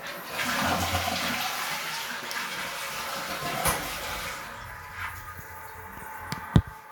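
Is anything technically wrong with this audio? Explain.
No, nothing technically wrong can be heard here.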